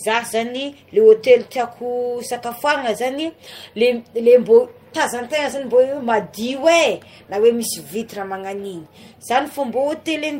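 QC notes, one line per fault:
No faults found on this speech clip.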